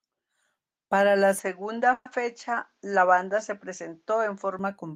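From 1.39 s to 4.59 s the speech turns duller, with nothing above 7.6 kHz and a faint new noise floor underneath, then clears again. This is likely an input switched to a poorer device. Unlike a plain filter, tone and background change together, with no gap or level jump.

At 1.93 s, inside that stretch, a call audio freeze holds the last sound as a 120 ms fading buzz, then about 30 ms of silence, until 2.07 s. The speech resumes 120 ms late with nothing missing, which distinguishes it from a dropout. Delayed packets likely emptied the jitter buffer.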